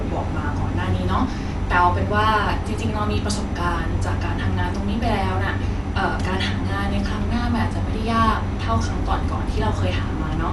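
It's a speech clip, and the whole thing sounds dull and a bit rough, with nothing at all above about 11.5 kHz and a grainy, fluttering noise hanging around the voiced parts. That's most likely Dolby Digital compression at a starved bitrate, which fits a 64 kbps stream. The encoder has trimmed the top of the band and left a lot of frequency lines without real detail, so the decoder patches them with noise, and you can plainly hear it.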